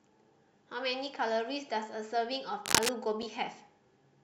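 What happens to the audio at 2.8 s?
A burst of cable scratch noise runs from 2.65 to 2.90 s, sitting roughly 5 dB above the speech as dense, uneven rustling, likely from a worn connector shifting its contact resistance.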